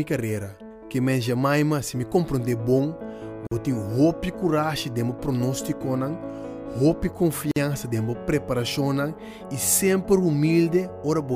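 At 3.47 s and again at 7.51 s there's a gap at a join of encoded pieces: about 46 ms, then 49 ms, four seconds apart. Separately encoded chunks were butted together with their start delay and end padding left in, so the sound drops out abruptly, smeared at the edges, then resumes right where it stopped.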